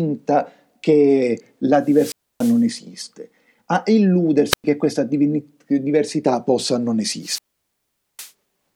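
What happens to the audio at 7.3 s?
A wireless microphone squelch dropout: the radio link from the analogue FM transmitter fades, and the receiver's squelch shuts the output off once the signal falls too low. From 7.21 s to 8.32 s, just after "diversità possa non", a brief swell of hiss and static gives way to a near-silent hole of about 0.81 s, before the speech comes back as the receiver reopens.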